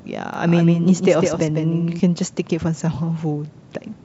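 From 0.34 s to 2.0 s the speech is shadowed by a second, slightly quieter copy of itself trailing about 150 ms behind, a flat, dry doubling with no reverb tail or room colour. It switches on and off abruptly at those points. This is a doubled audio track, most likely from the same signal being captured again through a slower path, or an edit leaving two out-of-step copies mixed together, the later one about 5 dB down.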